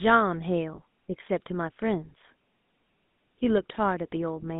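Throughout, the GSM full-rate codec gives the speech a plainly audible buzzy, gravelly roughness from pulse-driven excitation. On a spectrogram, energy sits between 150 Hz and 3.7 kHz, which fits 13 kbps full rate.

From 0.76 to 0.79 s, lost GSM frames are patched by repeating the previous frame, producing a brief metallic ring. This shows as smeared, flat harmonics and fits one missing 20 ms frame.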